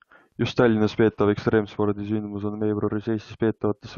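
No technical faults are audible.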